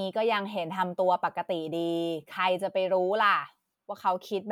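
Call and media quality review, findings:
Nothing to flag here; the speech comes through without any audible problems anywhere in the recording.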